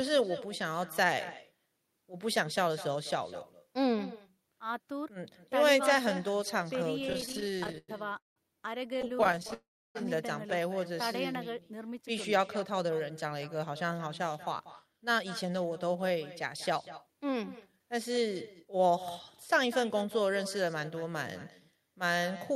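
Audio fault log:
Throughout: echo with no canceller. Every phrase returns about 200 ms later, some 16 dB quieter and thinner, because the far end's loudspeaker feeds its microphone and nothing subtracts it. On a spectrogram, each burst of energy has a fainter, smeared twin trailing it.
6.99–8.38 s and 8.86–9.54 s: repeated stalls (stutter). Dozens of tiny stalls drag the sound as packets arrive late and the buffer empties. Held-over sound fills roughly a third of the first run, with stalls up to 179 ms, and a quarter of the second, with stalls no longer than 17 ms. The waveform shows stretched, repeating fragments.
9.54–9.97 s: call audio freeze. The sound stops and the last fragment is continued for 412 ms, most of it (310 ms) as silence, before resuming where it left off. The likely cause is packets held up in the network. A spectrogram shows a brief fading smear, then a blank gap.
12.61–18.94 s: jitter buffer speed-up. 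After built-up delay, the receiver trims tiny pitch-period slices repeatedly, so the sound runs about 7% fast at unchanged pitch, removing roughly 0.4 s. Harmonics stay level on a spectrogram while syllables are compressed in time.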